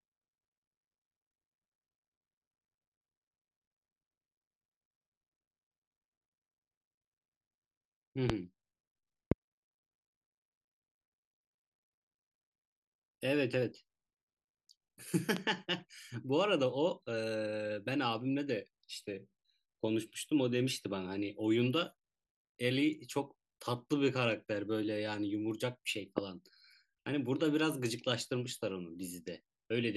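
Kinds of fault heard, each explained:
Loud pop: four sharp, single pops sit on top of the speech, at about 8.30, 9.32, 15.37 and 26.18 s, each lasting only around 20 ms. Most jump roughly 20 dB above the surrounding level, and the one at 15.37 s is a bit softer at about 15 dB. The speech carries straight on underneath, which points to a brief voltage spike, likely from static, a switch or a driver glitch, added to the signal.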